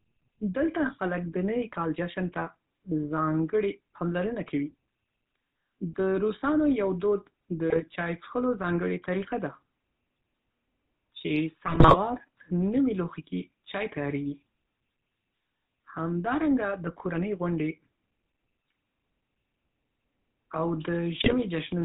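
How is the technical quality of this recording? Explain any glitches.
The quality is poor: the speech carries telephone-codec coloring all the way through, plus three short bursts of corruption.

GSM full-rate codec, throughout: the voice is rebuilt from a vocal-tract model driven by sparse pulses, with nothing above 4 kHz, giving a plainly audible buzzy, gravelly roughness consistent with 13 kbps GSM.

GSM bit errors, at 7.70–7.83 s, 11.66–11.97 s and 21.22–21.35 s: corrupted filter, pitch and gain values distort 6, 14 and 6 frames respectively, so the voice breaks into squawks, pops and gargling.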